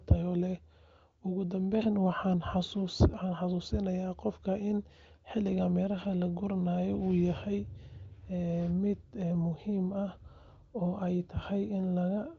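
No technical faults can be heard in this speech, which carries the band-limited character of the AMR wideband (HD Voice) codec, with nothing above about 7.6 kHz and the full, clear quality that points to one of its higher rates, around 23 kbit/s.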